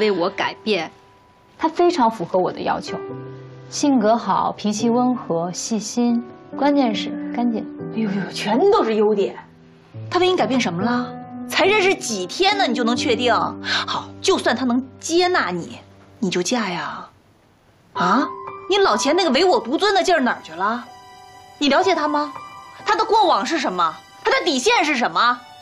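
Nothing in the recording stands out as a problem; there's no moment where anything goes wrong that a listener would catch.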